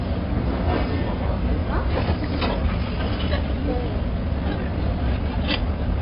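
AAC compression runs throughout: the audio is dull and smeared, with a fizzy, warbling texture, likely from AAC-LC quantising heavily at a very low bitrate, which fits roughly 16 kbps. A time-stretched section runs from 1.92 s to the end: the pace jumps to about 1.67 times faster with pitch unchanged, sounding rushed, likely from software dropping short pieces to shorten it.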